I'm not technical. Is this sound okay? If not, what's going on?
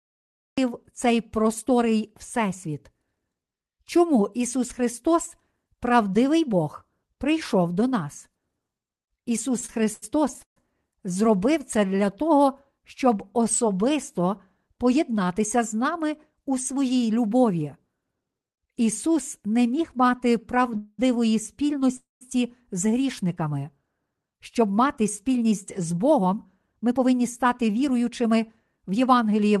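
No. The speech begins abruptly at 0.58 s, right on "цей просторий", with no natural lead-in. This is a cut-off start: the recording or stream began late, so the first moment drops straight out of silence into the middle of the sound.

From 9.59 to 10.58 s the speech stutters and drags, catching six times, the longest for about 0.14 s. These are repeated stalls (stutter): the audio kept arriving late, so the player stretched the last sound to fill each wait. Nothing is lost, but the flow is broken.

Two short call audio freezes follow. The first runs from 20.77 to 21.00 s, just after "не міг мати", and is mostly a held, smeared sound with a brief drop to silence. The second runs from 21.96 to 22.23 s, just before "з грішниками", and is mostly silent. The likely cause is audio held up on the way, so playback paused and then resumed where it left off.

From 24.39 s to the end the speech sounds slightly rushed, running about 7% fast with normal pitch. 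This is jitter buffer speed-up: the player had a backlog and trimmed tiny slices, roughly four tenths of a second in total, to catch up.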